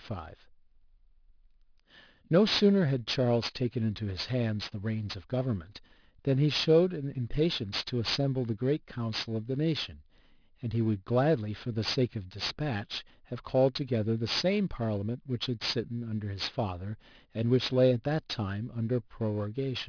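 Aliasing runs throughout: resampling from 24 kHz to 11 kHz without filtering folds energy above 5.5 kHz back down, making sibilants gritty and metallic.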